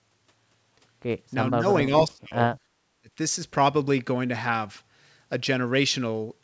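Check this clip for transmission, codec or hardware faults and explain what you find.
Speech suppressed in double talk, three times: 1.52 to 1.64 s, 1.85 to 2.58 s and 3.01 to 3.10 s. The likely cause is an echo canceller mistaking the talker for loudspeaker echo and ducking both. The first dip is slight, about 5 dB; the others fall roughly 30 to 35 dB, near silence. The level sags, not with the clicks or repeated fragments of packet loss. The 8 kHz top end fits G.722 wideband.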